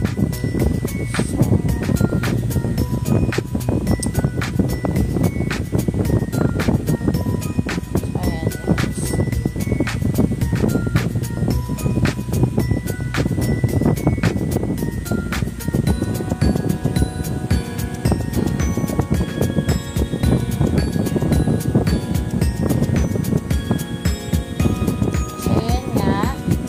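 No technical faults are audible.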